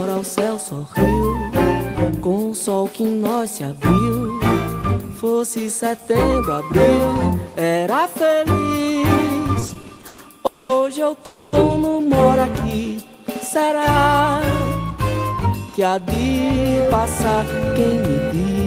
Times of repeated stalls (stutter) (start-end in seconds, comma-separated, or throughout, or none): 9.53-10.20